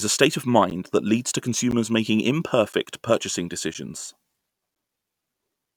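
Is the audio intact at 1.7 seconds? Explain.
No. Just after "that leads to", at 1.71 s, the speech drops out in a hard-edged hole of about 12 ms. This is a gap between chunks: the audio appears to arrive in one-second pieces, and silence is left at a join rather than any sound being lost.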